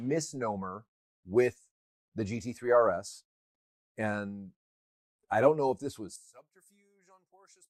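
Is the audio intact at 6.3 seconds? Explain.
No. One channel inverted, from 6.16 s to the end at 7.69 s: the level suddenly falls by about 29 dB and only a faint residue of the sound remains. The likely cause is one stereo channel flipped in polarity, so when the two channels are summed to mono, everything they share cancels. Centred material disappears, and only the small differences between the channels survive.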